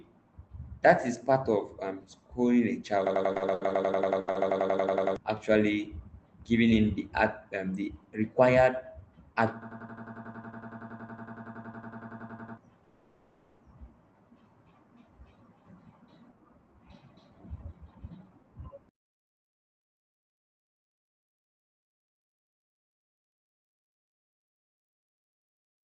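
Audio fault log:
3.07–5.16 s and 9.62–12.58 s, system hang loop: a single 92.88 ms slice repeats like a machine gun at 10.8 Hz, 20 times in the first run and 32 in the second. The driver froze while the hardware kept replaying one ring buffer, which fits a 4096-sample buffer. Roughly 2 s and 3 s of real audio never arrive.
3.33–3.72 s, repeated stalls (stutter): the speech drags and hiccups through four gaps. Packets kept turning up late, so the jitter buffer ran dry over and over and the receiver stretched the last sound each time. That filled 130 ms in all, the longest gap 70 ms, about a third of the span, with nothing missing.
4.20–4.29 s and 4.31–4.37 s, short stall from a late packet: two quick holds, one 70 ms and one 40 ms, where a sound hangs on too long with a slight buzz or dip. Each time a packet missed its slot, the receiver extended what it had until the packet showed up, then picked up right where it left off.
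12.84–13.62 s, call audio freeze: the sound turns into a fading buzz or hiss for 760 ms without going fully silent, then carries on from the same spot with nothing lost. The likely cause is packets stuck in transit, leaving the jitter buffer empty while the receiver filled the wait.
16.22 s to the end, jitter buffer speed-up: everything runs about 6% fast at unchanged pitch, so the talking sounds a little hurried. The buffer had piled up extra audio and the receiver trimmed it back by snipping out tiny pitch-period chunks again and again, around 0.7 s in total.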